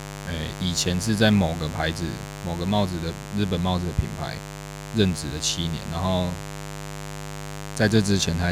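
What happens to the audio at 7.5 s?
At 7.5 s you're still hearing the mains buzz that runs through the whole clip. Switching spikes at twice the 50 Hz mains rate stack up harmonics into the kilohertz range, so there's a raspy, steady buzz sitting only around 10 dB under the speech.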